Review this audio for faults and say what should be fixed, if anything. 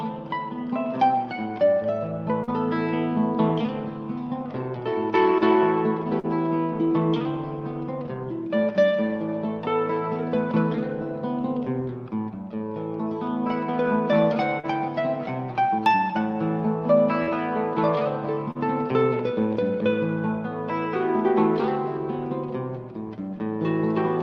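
Short concealed packet loss occurs five times, at 2.43, 6.19, 14.60, 17.23 and 18.51 s. At each point about 40 ms of audio failed to arrive in time, and the receiver covered the gap by extending the preceding sound before crossfading back into the real signal. Each event is a brief smear or wobble, and a short sound falling inside a gap can be lost. The call codec's top end stops around 12 kHz. To prevent this, improve network stability or give the jitter buffer more headroom.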